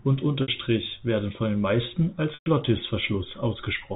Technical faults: packet loss with pitch repetition

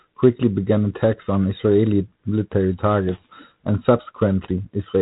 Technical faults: G.726 ADPCM

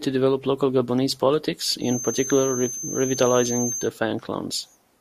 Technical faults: feedback whistle

